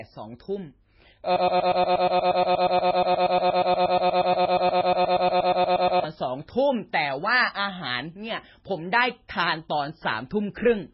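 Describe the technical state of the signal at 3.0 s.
At 3.0 s the signal is inside a broken-record loop running from 1.36 to 6.04 s: a 119 ms fragment repeats back to back 39 times, likely from a stalled stream resending its last buffer, so the intended audio is lost. Heavy MP3 compression is also present, with nothing above 5.5 kHz and a watery, swirly texture, which points to a very low bitrate, likely around 16 kbps.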